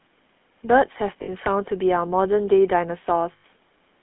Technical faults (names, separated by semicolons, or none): GSM full-rate codec; lost GSM frames